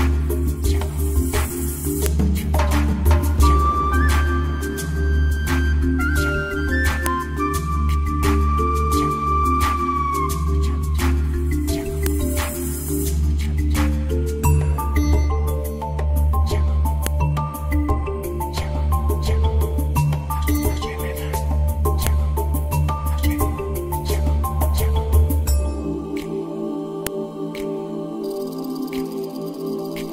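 A sharp click or snap sounds at 2.06, 7.06, 12.06, 17.07, 22.07 and 27.07 s, every 5 seconds. This is a file header played as audio. The pieces were joined with their WAV headers left in. Those header bytes play back as samples at each join.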